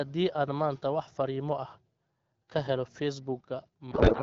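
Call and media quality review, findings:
Codec payload misread, 3.91 s to end: speech collapses into garbled warble barely following it. Points to octet-aligned AMR-WB parsed as bandwidth-efficient, so fields land misplaced.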